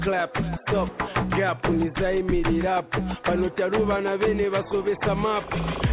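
No technical faults are audible.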